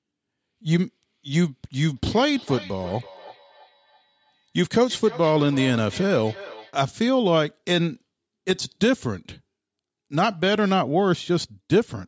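From 1.96 to 6.76 s the speech carries feedback echo between two devices: a second device replays the call and this microphone recaptures it, beyond its echo canceller's reach. Each phrase returns roughly every third of a second, thin and ringing, peaking about 18 dB below the speech.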